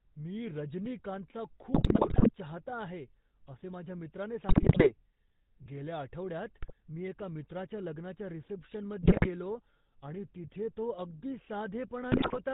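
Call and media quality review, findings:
GSM full-rate codec, throughout: buzzy, gravelly speech with a hard ceiling near 4 kHz, plainly audible. Consistent with 13 kbps full-rate coding: vocal-tract filter driven by a decimated regular pulse excitation keeping one sample in three, so upper harmonics turn coarse and rasp.

GSM bit errors, five bursts: 1.74–2.31 s after "मी रजनीकांतचा"; 4.48–4.93 s after "आहे असे माझ्या मित्राने"; 6.62–6.73 s between "गेल्या आठवड्यात" and "मी एका मित्राच्या लग्नाच्या"; 9.02–9.29 s; 12.12–12.38 s. Squawks, pops, gargling. Corrupted filter, pitch and gain parameters reaching the decoder, frame-level spectral warping and level spikes.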